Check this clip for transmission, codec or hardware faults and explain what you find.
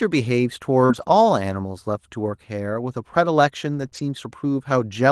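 Two kinds of transmission fault occur, both clustered around 0.85 to 1.03 s and 3.73 to 3.99 s, carried over an Opus call path whose audio tops out near 12 kHz.

Short concealed packet loss, at 0.85 to 0.91 s and 3.89 to 3.93 s: about 40 ms and then 20 ms of audio arrived too late to decode. The receiver extended the preceding sound to cover each hole and blended back, which is heard as a brief smear or wobble in the speech.

Lost packets rebuilt from error correction, at 0.89 to 1.03 s, 3.73 to 3.87 s and 3.93 to 3.99 s: the decoder substituted the low-bitrate backup copies that travel inside the following packets. This covers about 80, 80 and 40 ms, which points to four, four and two lost 20 ms packets. There is no gap, but those stretches sound rougher and noisier.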